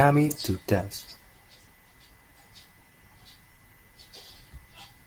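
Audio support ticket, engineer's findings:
Nothing stood out on listening to this speech clip, and no finding is logged against it.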